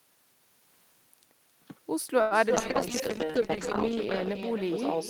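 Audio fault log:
Throughout: echo with no canceller. The far end plays the call aloud and its microphone sends it straight back, so every phrase is trailed by a second copy about 6 dB quieter. That copy arrives roughly a third of a second late. Its delay is long enough to hear as a separate repeat rather than added room tone. Passing through a loudspeaker, a room and the network again, the echo sounds thinner than the direct sound.
2.21 to 2.33 s: short stall from a late packet. A packet came in late and the playout buffer ran dry. The receiver held the last sound for 97 ms to cover the gap, then picked up exactly where it had stopped. Nothing is lost, but one sound drags on unnaturally with a faint buzzy sustain. From this point on, the rest of the call plays 97 ms later than before.
2.49 to 2.52 s and 2.56 to 2.58 s: short concealed packet loss. Two gaps follow close together, about 20 ms and 40 ms of audio that never reached the decoder in time. 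The receiver papered over each by extending the preceding sound and blending back in. Very little was filled, so the effect is a quick smear or wobble rather than a hold. The second gap also pulls playback about 40 ms earlier, briefly clipping what was there.
2.56 s to the end: call bitrate drop. The sender cut its rate from 32 to 8 kbps, likely after its bandwidth estimate fell. At 8 kbps Opus codes far more coarsely and discards the upper frequencies. The sound turns muffled, rough and watery. It sits at that floor for 1.38 s and does not fully recover before the clip ends.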